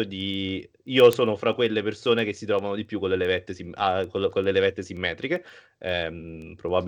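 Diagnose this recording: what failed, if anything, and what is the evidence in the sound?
The digital interface clocking failed: word clock ticks run through the speech from 0.21 s to 6.82 s, roughly seven a second, about fifty in total. The receiving device's clock isn't locked to the sender's, drifting by around 150 ppm, so single samples are dropped or repeated at each slip.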